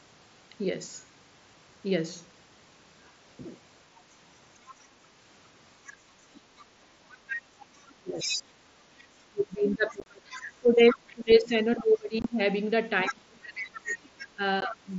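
From 3.99 to 4.75 s a faint second voice sits far beneath the main speech, roughly 25 dB down. This is the other side's voice leaking through, likely residual echo that the canceller left after the far end played on the talker's loudspeaker. It returns from 5.86 to 14.25 s much stronger, only about 10 dB under the talker. That separates it from crosstalk or background chatter, since it is the remote party's own speech coming back.

While that echo is present, the talker's own level collapses: from 7.76 to 8.33 s, and again in pieces from 9.29 to 14.9 s for about four seconds in total, with dips of up to roughly 25 dB. This is speech suppressed in double talk. Both ends were speaking, and the canceller likely could not tell its talker from the echo, so it turned the whole signal down.

Unconcealed Bluetooth headset packet loss gives a different kind of break: abrupt holes. At 10.0 to 10.06 s there are several gaps totalling about 38 ms, the longest 22.5 ms. 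A 22.5 ms gap follows at 12.22 s and a 15 ms one at 14.61 s. The lengths fit whole 7.5 ms mSBC frames being dropped and replaced by silence or an idle pattern, within the otherwise light grain of the wideband mSBC link.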